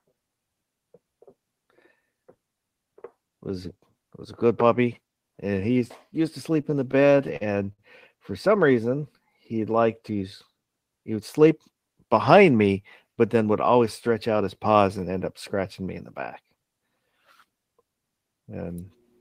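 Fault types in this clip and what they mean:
Repeated stalls (stutter): From 6.53 to 7.80 s, packets arrived late and the jitter buffer ran dry 11 times. Each gap was bridged by extending the last sound, 189 ms in all, the longest 58 ms. Nothing is lost, but the audio drags and catches.
Jitter buffer speed-up: From 11.20 to 11.56 s, the receiver trimmed excess buffered audio by cutting short pitch-period pieces, about 40 ms in total. The sound plays at 109% speed with unchanged pitch, so this stretch comes across as briefly hurried.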